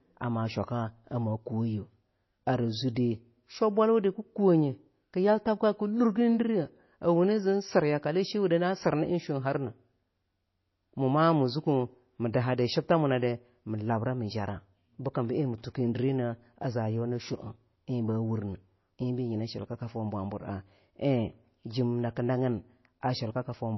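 Throughout the speech, the sound is dull and watery, with a swirling, metallic edge on s sounds and smeared consonant attacks, and nothing above 5.8 kHz. The likely cause is heavy MP3 compression at a low bitrate, around 24 kbps, which cuts the treble and switches faint frequency detail on and off between frames.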